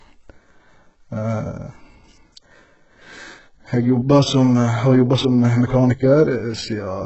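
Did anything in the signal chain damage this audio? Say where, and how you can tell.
Yes. Across the whole speech clip the s sounds come out gritty and metallic, and nothing reaches past 8 kHz. This points to the codec stage, likely HE-AAC compression at a very low bitrate, around 8 kbps, where treble is rebuilt from copied lower bands rather than coded.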